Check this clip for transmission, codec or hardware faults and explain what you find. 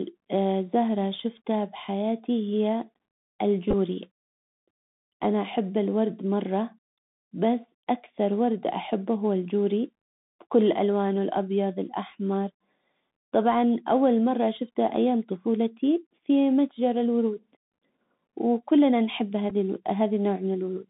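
Two faults are present: narrowband Bluetooth headset coding across the whole speech clip, and two brief packet-repeat glitches.

Bluetooth CVSD headset codec, throughout: the link codes audio as one up-or-down bit per sample with an adaptive step, which fits a 64 kbps CVSD stream. The band runs only from 150 Hz to 3.7 kHz, with plainly audible granular hiss, scratchy sibilants, and distortion where loud high content outruns the step.

Bluetooth headset packet repeated, at 3.71–3.74 s and at 19.50 s just after "وكلنا نحب": lost voice packets were replaced by decoding the previous packet again. The first event spreads about 15 ms of loss over 30 ms, giving a brief buzz near 267 Hz. The second, about 7.5 ms, is a brief buzz near 267 Hz.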